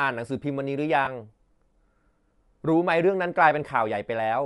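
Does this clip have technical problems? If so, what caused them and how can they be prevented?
Yes, there are two. Throughout the speech there's a plainly audible grainy, breathy edge on the upper frequencies, likely from Bluetooth LC3 compression. LC3 works on short transform frames, and the character here fits 10 ms frames at around 48 kbps. At that rate the encoder drops much of the top of the spectrum and fills it with noise, which gives the voice that breathy, grainy texture. To prevent it, give the link more bitrate or record on the device rather than through the Bluetooth stream.

The second is a short patch of lost LE Audio frames from 1.05 to 1.08 s, a 20 ms gap that fits two 10 ms frames going missing. The decoder covers the hole by replaying the last spectrum with scrambled phase, so instead of a clean dropout you get a brief noisy smear. Keeping the headset close to the source and away from Wi-Fi congestion should prevent the dropped packets.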